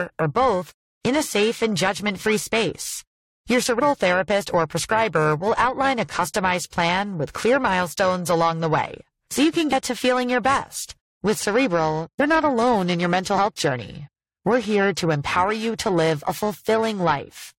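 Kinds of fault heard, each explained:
Periodic clock jitter: A disturbance near 1 kHz wobbles the converter's sampling clock. Every component of the speech gains sidebands spaced about 1 kHz above and below it, and the upper harmonics and sibilants are affected most. The result is a gritty, metallic edge on the voice throughout that disappears in the pauses. On a spectrogram, ghost copies of the harmonics sit offset by about 1 kHz. The waveform looks normal.
Compressed frames skipped: Whole blocks of encoded audio never reach the output, so the speech jumps forward. This happens at 3.78, 9.72, 12.19 and 13.36 s. Roughly 150 ms goes missing at the first point, about 70 ms at the next two and about 40 ms at the last, which fits several frames of about 21 ms each. On a spectrogram and waveform the speech pattern breaks abruptly.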